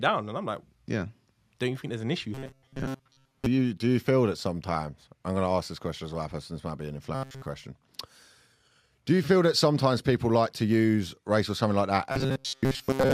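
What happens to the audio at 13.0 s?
From 12.12 to 13.14 s the speech becomes a rigid metallic buzz at 133 Hz: robotic sound from repeated short buffers, likely a replayed 7.5 ms chunk.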